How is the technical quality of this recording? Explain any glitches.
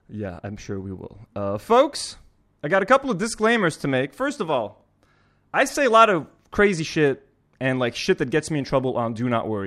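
The technical quality of this recording is good, with no glitches to explain.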